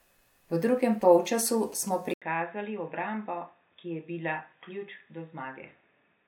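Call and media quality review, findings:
GSM signalling bursts, 1.02–1.89 s: galloping dit-dit-dit of short 217 Hz buzzes, about 25 dB below speech. Nearby 2G handset, rectified by the audio front end. The gated rhythm sets it apart from steady mains hum.

Input switched to a poorer device, 2.14 s onward: 80 ms gap, then boxy, nothing above 3.8 kHz, level about 10 dB lower, new noise floor. Likely a headset call profile. The gap and level step distinguish it from a codec bandwidth drop.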